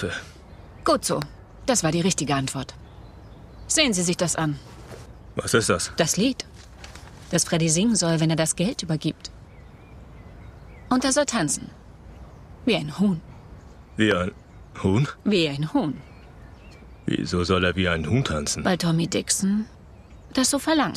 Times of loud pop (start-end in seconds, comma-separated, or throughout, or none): 1.22-1.24, 14.11-14.13